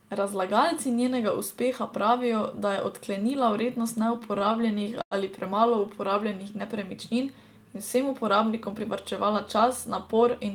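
Speech that drags and stutters from 4.19 to 5.14 s, right after "da je odklenila vrednost", shows repeated stalls (stutter). The jitter buffer ran dry eight times, and the receiver stretched the last sound to fill about a fifth of that span, the longest wait 96 ms. From 8.71 to 9.66 s the speech runs slightly faster at unchanged pitch. This is a jitter buffer speed-up: it ran 104% fast, trimming about 40 ms of short pitch-period pieces to shed excess delay.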